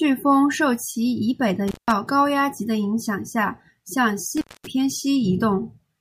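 At 1.68–1.91 s and 4.37–4.67 s, an intermittent contact drops the speech for about 170 ms and 230 ms, leaving near-flat waveform gaps with crackle spikes at each edge.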